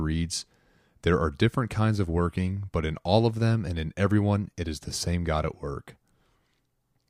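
No technical faults can be heard anywhere in the recording.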